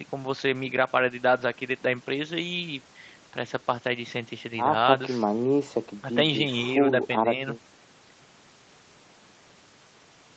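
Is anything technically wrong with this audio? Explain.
No, nothing here is wrong; the speech has simply come through an ordinary call chain, with the microphone's high-pass trimming the lowest bass and the Opus call codec limiting the band so nothing sits above 8 kHz, which is just how that path normally sounds.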